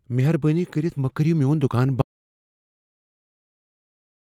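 At 2.02 s the speech cuts off mid-flow in an audio dropout to silence, and it never returns: from there to the end of the clip the signal is silent, with no room tone or noise floor underneath. That total absence points to the input being lost rather than the talker pausing, most likely a disconnected device, a failed link or an accidental mute while recording continued. Whatever was said after 2.02 s is unrecoverable.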